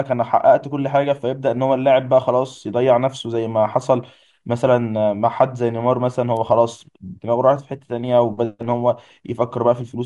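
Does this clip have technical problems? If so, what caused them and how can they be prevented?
Yes: a bit error spike at 6.37 s, a single sharp tick peaking around -20 dBFS. A flipped bit threw three consecutive samples off by a power of two before they snapped back. Unlike a dropout click, no audio goes missing. Error-checked links and ECC memory prevent this.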